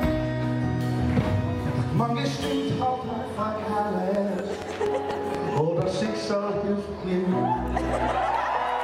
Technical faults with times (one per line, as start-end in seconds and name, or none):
4.15-6.07 train of clicks